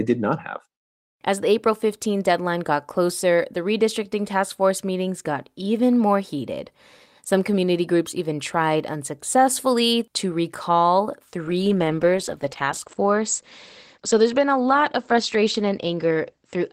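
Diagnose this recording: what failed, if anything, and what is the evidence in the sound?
From 11.52 s, just after "tried unsuccessfully to recall", the speech turns muffled and rough and watery, and it stays that way to the end of the clip. The top of the spectrum drops from about 20 kHz to about 8 kHz. This is a call bitrate drop at the call-processing and codec stage. The bandwidth estimate fell, so the Opus encoder coded more coarsely and cut the highs. The sound fits a fall from about 40 to about 12 kbps, held for roughly 4.9 s without recovering.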